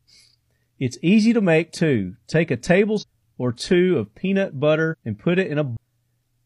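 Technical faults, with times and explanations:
2.98–3.04 s and 4.88–4.95 s, damaged data in a compressed stream: Both times, a stretch of the encoded stream arrived corrupted, so the decoder misread the frames there, lost sync and had to hunt for the next valid frame header. Each event lasts about 60 ms and is heard as a short, synthetic chirp or blip in place of the sound. The first falls just before "or two of peanut", and the second just after it.
5.77 s, CD skip: A knock or a flaw made the laser jump off its track and land on a different turn of the disc's spiral. The player mutes briefly, for around ten milliseconds, which is heard as a small tick. Playback then carries on from the new position, so the sound jumps abruptly instead of continuing smoothly from where it was cut off.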